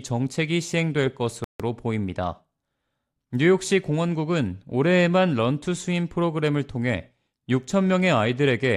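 A rebuffering stall at 1.44 s: playback ran out of downloaded audio, so the speech drops to silence for about 0.15 s, then resumes exactly where it stopped.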